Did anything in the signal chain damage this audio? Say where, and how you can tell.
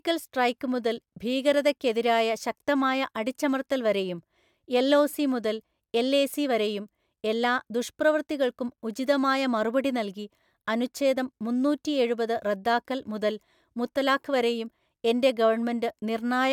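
No, nothing stood out on listening to this speech recording that would point to damage anywhere along the way.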